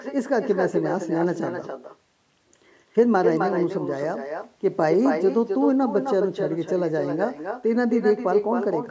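From start to finish, the speech carries an echo with no canceller. The far end plays the call through a loudspeaker. Its microphone picks that sound up and sends it straight back. Nothing removes it. Each phrase returns around a third of a second later. The copy sits about 6 dB below the direct speech. It sounds thinner, like a shadow trailing every word. The band-limited call sound, with nothing above 8 kHz, is heard in both copies.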